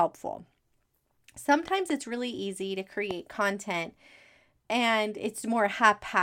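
Twin sharp pops at 1.68 to 1.92 s, before "it's really easy to", and one at 3.11 to 3.13 s, after it, jump roughly ten dB above the speech. These loud pops are likely voltage spikes from a plug, switch or static.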